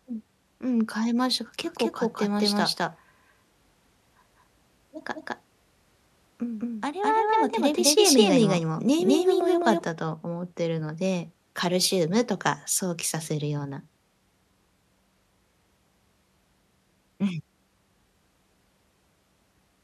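From about 1.64 s to 9.84 s there's a doubled audio track on the speech. A second, full-band copy trails the original by roughly a fifth of a second, at about the same level, so everything sounds stuttered and smeared rather than roomy. There's no decay or reverb colour on it. It's likely a second capture through a slower path getting mixed back in. The copy cuts in and drops out abruptly at both ends.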